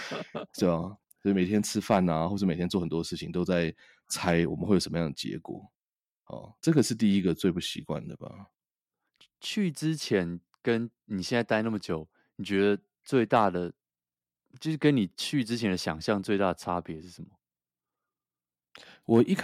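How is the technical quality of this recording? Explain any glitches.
The recording has one recurring fault: hard clipping on five brief loud peaks in the speech. It occurs at 1.91 to 1.97 s, 4.28 to 4.32 s, 6.78 to 6.80 s, 13.35 to 13.45 s, and 19.14 to 19.21 s. The peaks exceed what the signal chain can pass by about 2 to 4 dB. Their tops are sliced flat. Those flat edges create high harmonics. Each event is heard as a short crackle on the peak.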